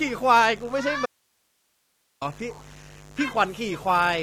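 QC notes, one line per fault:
Throughout: mains buzz. A steady, raspy buzz sits under the speech at about 25 dB below it, built on 50 Hz with harmonics running up into the kHz range, the mark of sharp switching spikes from a dimmer, rectifier or unshielded lead entering twice per mains cycle.
1.06 to 2.21 s: audio dropout to a faint residue. The speech cuts out abruptly for about 1.16 s and returns just as suddenly; the gap holds only hiss at about 45 dB below the signal, likely a lost source while the downstream path stayed live.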